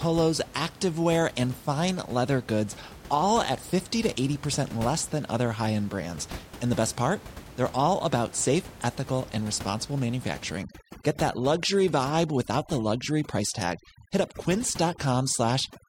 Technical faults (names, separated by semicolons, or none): overdone noise removal